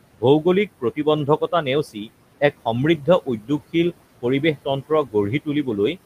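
Noise suppressor artifacts run through the whole clip. The suppressor estimates the steady room noise, which sits about 17 dB below the speech, and pulls down each frequency band it judges to be noise, by about 18 dB. Because that gain changes frame by frame, the background sinks in the pauses and swells back under the speech.

Speech cut by the noise suppressor happens three times, between 1.84 and 2.1 s, 3.26 and 3.5 s, and 4.89 and 5.14 s. In each, the suppressor mistook quieter parts of the speech for background and turned them down with it, by about 16 dB, 12 dB and 15 dB at the deepest. Only about a tenth of a second is affected in the first and third spans, and somewhat more in the second. Those sounds come out swallowed and faint.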